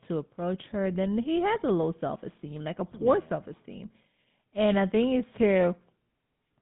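From start to finish the speech carries the signature of the GSM full-rate codec. The band sits between roughly 150 Hz and 3.6 kHz, and the voice has the characteristic buzzy, gravelly texture that fits the 13 kbps full-rate mode. The codec rebuilds the vocal tract filter and drives it with a pulse excitation that keeps only one sample in three, which is where the roughness comes from. Simple telephone band-limiting would dull the sound without adding that grit.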